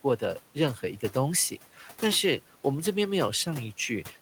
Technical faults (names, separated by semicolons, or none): speech cut by the noise suppressor